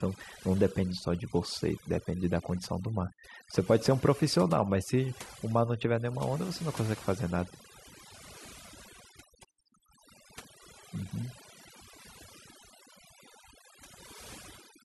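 A speech recording with overdone noise removal running the whole way through. The noise reducer was pushed so hard that any frequency band sitting near its idea of the noise floor gets pulled right down or shut off, and the softer parts of the voice get caught too. So the background drops and breaks up into little twinkling specks.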